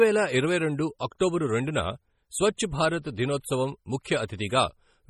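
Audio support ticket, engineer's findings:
Heavy compression throughout, likely MP3 at a low bitrate around 32 kbps. Bit starvation zeroes weak frequency lines frame to frame, giving watery, swirly speech and chirpy s sounds; top end stops near 20.6 kHz.

Pre-echo at 4.04 s. Codec spreads quantisation noise across the transform block, so a late attack drags about 18 ms of hiss ahead of itself, softening and smearing the onset.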